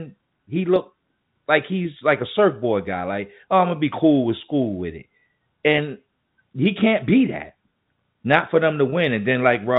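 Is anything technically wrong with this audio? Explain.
Yes. Packet loss with pitch repetition occurs at 1.99 to 2.01 s and again at 8.90 to 8.92 s. Each time about 20 ms of audio went missing, which fits two 10 ms packets, and the receiver bridged the gap by repeating the last pitch period. The result is a brief, slightly held, buzzy moment in the speech, heard through the narrow telephone band of the G.711 coding.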